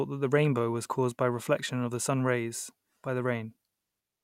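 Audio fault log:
Nothing to log here, since the speech comes through without any fault to point at.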